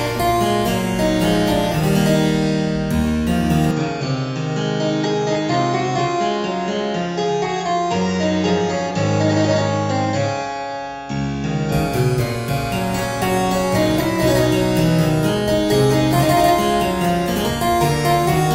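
From 3.71 s to 11.72 s the sound turns duller and a few decibels quieter, with nothing above 7.6 kHz and a faint new noise floor, then clears at 11.72 s. The likely cause is an input switched to a poorer device, with no gap at either switch.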